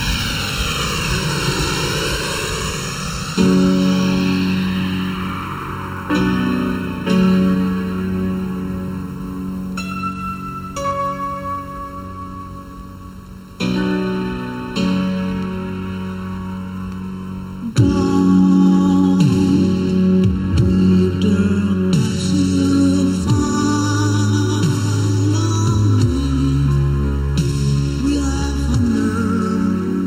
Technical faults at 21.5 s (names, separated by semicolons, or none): channel delay (comb filtering)